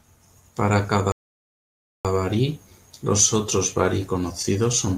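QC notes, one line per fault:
1.12–2.05 s, playback stall: the speech cuts to silence for about 0.93 s, then resumes at "barí los otros barí", likely from the player running dry. One clean gap, not repeated hitches.
4.42–4.98 s, repeated stalls (stutter): after "barí los otros barí", the audio keeps catching and smearing the last sound as the jitter buffer repeatedly empties. Many short drags rather than one silent gap.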